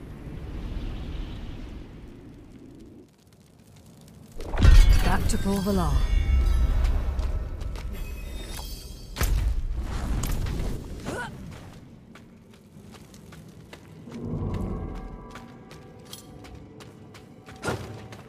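A sudden gain jump runs from 10.77 s to 12.74 s. At 10.77 s the level drops by about 5 dB in a single step, with no fade, and it stays there until 12.74 s, when it returns just as abruptly. The sound and its background noise fall and rise together, which points to the whole signal being scaled. The likely cause is a digital gain setting, or a bit shift, applied instantly rather than ramped.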